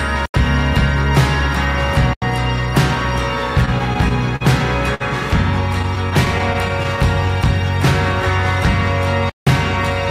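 At 0.26 s and again at 2.13 s the audio drops into a block of digital silence about 85 ms long, ending at 0.34 s and 2.22 s. A stretch of samples was replaced by zeros, most plausibly because the output buffer was not filled in time. The length fits a 4096-sample block. Each gap is heard as a short hole. On a waveform the trace goes flat between two vertical edges. A spectrogram shows a blank column with thin broadband lines at each boundary.

From 3.65 s to 4.42 s there are repeated stalls (stutter). Packets kept arriving late, so the jitter buffer emptied five times, and the receiver stretched the last sound to fill about 91 ms in total. The longest wait was 44 ms. Nothing is lost, but the sound drags and hiccups. A spectrogram shows brief stretches where the harmonics run on flat and unchanging, some of them fading.

At 4.94 s to 5.02 s a short stall from a late packet holds one moment for about 57 ms before the sound carries on from the same point. 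It is heard as a prolongation. On a spectrogram it appears as a smeared, frozen stretch of frequency content with no gap.

A second stutter runs from 5.82 s to 6.99 s, with nine small stalls totalling about 93 ms, none longer than 12 ms. It is heard as the audio dragging and stuttering, and it shows as short repeated flat patches in the spectrogram.

At 9.30 s a longer block of digital silence lasts about 171 ms, to 9.47 s, which fits an 8192-sample block. It is heard as a clear dropout. The waveform shows a flat line twice as wide as the earlier gaps.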